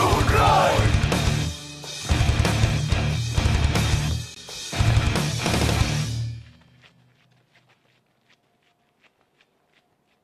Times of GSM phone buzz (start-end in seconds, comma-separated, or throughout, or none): none